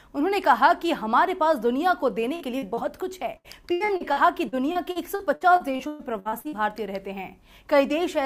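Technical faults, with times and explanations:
2.35–2.43 s, burst of packet loss: A short held continuation of the preceding sound fades down before the audio resumes a little further on. About 40 ms of audio never arrived, and the receiver patched the hole with roughly 48 ms of extended, decaying sound.
2.59–2.65 s and 2.74–2.80 s, short concealed packet loss: Two brief smears or wobbles sit close together. Each time about 40 ms failed to reach the decoder in time, and the receiver filled 33 ms and then 30 ms by continuing the last sound, then blended back.
3.37–6.55 s, repeated packet loss (robotic sound): Choppy, patched sound with pieces missing. Packets dropped again and again, leaving 17 gaps (the longest 120 ms), each covered by continuing the last sound, so about a quarter of this stretch is filled-in rather than real audio.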